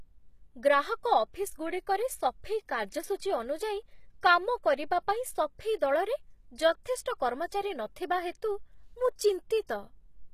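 A speech recording carries plainly audible codec damage from start to finish. Its treble is synthetic: s sounds come across gritty and lispy, and nothing survives above 14.9 kHz. This is likely HE-AAC compression at a low bitrate, around 20 kbps, where the upper band is rebuilt by copying lower bands upward rather than coded directly. A simple low-pass filter would leave the top dull and empty, but here the treble stays present while its harmonics fail to line up with the lower spectrum. At 9.67 s a short pre-echo appears, a hiss about 20 ms long just before a sharp attack, which lands softened and smeared. The codec spread noise sized for the loud onset across its whole block, including the quiet moment ahead of it. A click would be a single instant, and reverb would trail after the attack rather than lead into it.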